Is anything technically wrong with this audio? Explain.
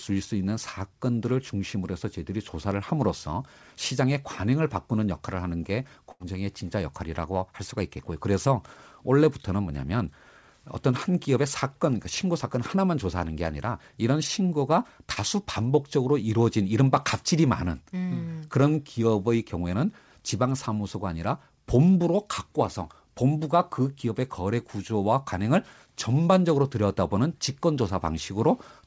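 Yes. Two packet-loss faults are audible in this speech.

At 6.12 to 6.22 s there is a burst of packet loss. About 80 ms went missing. The receiver stretched the last sound, fading it, then jumped ahead.

At 15.14 s there is a short concealed packet loss of about 20 ms. The decoder patched the hole by continuing the previous sound, leaving a brief smear.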